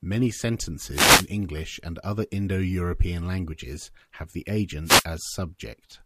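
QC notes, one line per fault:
0.91–1.28 s and 4.84–5.05 s, wireless microphone noise hit: brief swishes of static, the first just before "and other", the second just after "languages have the". The FM radio link faded as reflected signals cancelled, letting receiver hiss surge over the speech. Unlike a digital dropout, the sound is buried under rushing noise rather than cut to silence.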